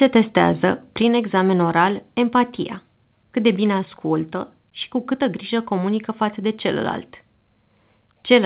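At about 1.02 s, right before "examen oral empatia", the speech and the background drop together by about 3 dB in one clean step. That's likely a microphone volume stepped down by the call software, with the narrowband G.711 path capping everything at 4 kHz.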